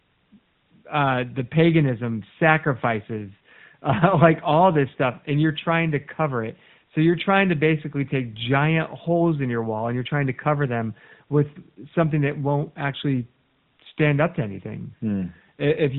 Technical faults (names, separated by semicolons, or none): none